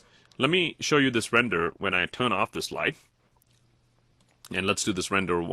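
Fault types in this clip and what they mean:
Adaptive stream at a lower bitrate: from 1.47 to 3.47 s the sound abruptly loses treble and gains codec artefacts, which fits a switch from 64 to 16 kbit/s Opus. A spectrogram shows the upper band suddenly thinning, while the waveform continues without a gap.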